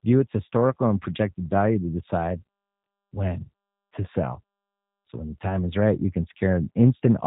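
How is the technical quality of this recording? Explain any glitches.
The recording has plainly audible low-bitrate telephony coding. Throughout the whole speech clip there's G.729 codec damage. The coder rebuilds each 10 ms frame from a vocal-tract filter, a pitch predictor and a few pulses, which fits roughly 8 kbit/s. Everything above 4 kHz is gone, so the voice sounds muffled, slightly rough and a bit synthetic.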